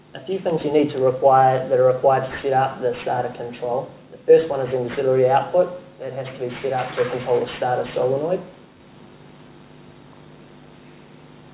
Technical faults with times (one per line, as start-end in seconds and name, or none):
0.00-11.54 aliasing